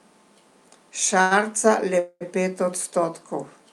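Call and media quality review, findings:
Short stall from a late packet, 1.21–1.33 s: sound held and stretched about 96 ms with slight buzz or dip. Jitter buffer ran dry awaiting a late packet and then resumed in place. Nothing lost, playout delay up 96 ms.

Call audio freeze, 1.99–2.23 s: 216 ms fill, buzz or hiss fading to 40 ms silence before resuming. Likely packets delayed in transit, draining the jitter buffer. Nothing lost, gap inserted, playout delay up 216 ms.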